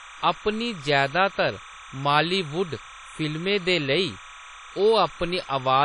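Timecode bleed runs through the whole speech clip: linear timecode at 30 frames per second has leaked in from an adjacent track or cable, and its square wave, flipping between roughly 1 and 2 kHz, sits about 20 dB below the speech as a constant chirping warble.

Also present from start to finish is plainly audible transform-codec damage, likely from WMA compression at a low bitrate, consistent with about 32 kbps. Nothing remains above 10 kHz, and coarse quantisation leaves smeared, ringing transients and a washy hiss that swells and fades with the speech.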